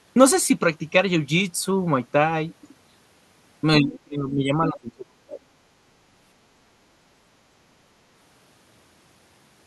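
From 3.79 to 5.43 s, an echo canceller likely treated double talk as echo, leaving speech suppressed in double talk, dipping by roughly 30 dB.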